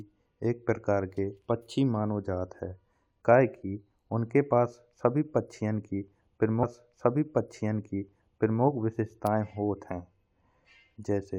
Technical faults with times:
6.62-8.63 stream segment repeated

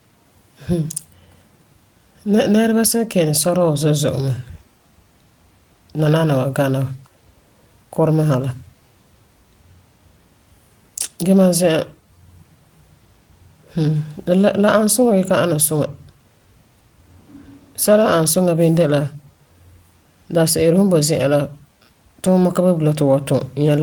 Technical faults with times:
none

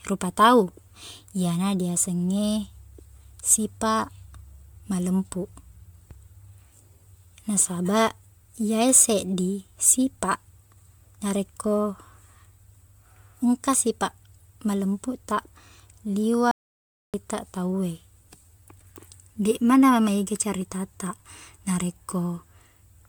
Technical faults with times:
0.00-23.08 generation loss
16.51-17.14 audio dropout to silence

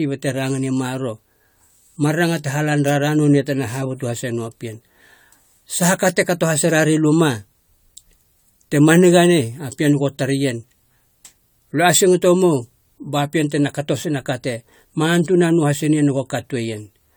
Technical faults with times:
0.00-17.17 generation loss

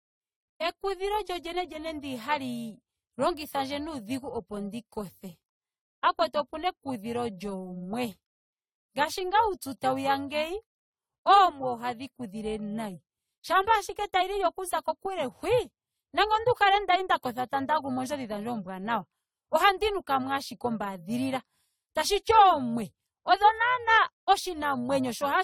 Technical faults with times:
0.00-25.44 overlap-add ripple
0.00-25.44 generation loss

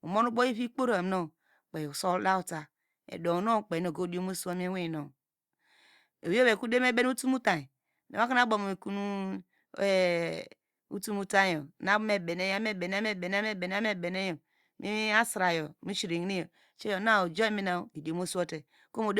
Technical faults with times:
none

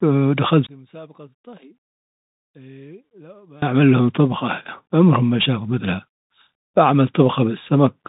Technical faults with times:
0.00-8.08 Bluetooth CVSD headset codec
0.67-3.62 one channel inverted

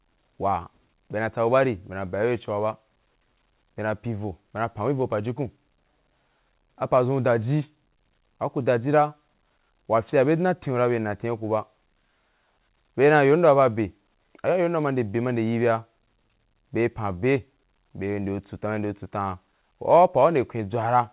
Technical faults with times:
none

